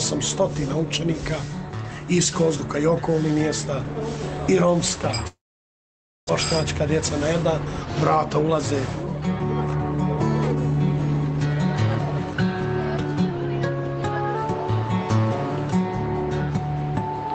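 From 5.27 to 6.31 s the audio gives way to a buzzy continuation of the last sound that fades quickly, leaving close to silence for about 0.9 s. When the sound resumes, roughly 0.6 s of material is simply gone and playback sits noticeably later than before. This is likely a long network dropout: no packets arrived for about a second, so the receiver improvised a fill, let it decay, then rejoined the stream past the lost part.

At 7.65 s the audio starts to rush without any change in pitch, running about 11% fast until 9.98 s and losing something like 0.3 s overall. It does so again more gently from 10.59 to 11.87 s, about 7% fast, with roughly 0.1 s dropped. Both stretches are a jitter buffer speed-up: the buffer had filled beyond its target, so the receiver trimmed short pitch-period-sized slices over and over to catch up.

Inside that first rushed stretch, from 7.82 to 8.48 s, and again from 13.31 to 14.35 s, everything sags at once, with pitch dropping about 105 cents (just over a semitone) and speed falling about 5.9%, before snapping back. 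This fits a drift correction step, with clock-matching software likely shifting the playback rate in one jump to rebalance its buffer. Throughout, the Opus call path keeps the sound band-limited to about 8 kHz.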